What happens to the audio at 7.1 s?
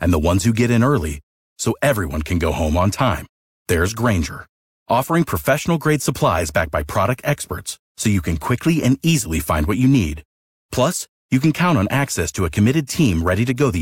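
Nothing goes wrong at 7.1 s; the speech carries on intact through that moment, with no dropout, click or distortion.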